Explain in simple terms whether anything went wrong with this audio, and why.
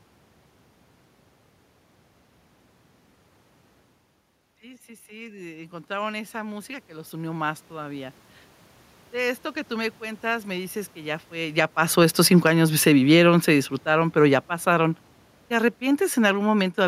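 Two things went wrong here, both from the automatic gain control reacting to the talker moving.

First, automatic gain rising, from 4.6 to 8.24 s. Around the 4-second mark the speaker drifts away from the mic and the level drops a lot. The gain control notices it's too quiet and slowly turns itself up over a few seconds, so the voice and the room noise swell back up together rather than the voice alone coming back.

Then automatic gain falling, from 11.44 to 16.77 s, just after "me dices que ya". The talker moves again around 11.5 s. The gain control decides it's too hot and eases itself down over the next five seconds, so the voice and background sink together until almost the end.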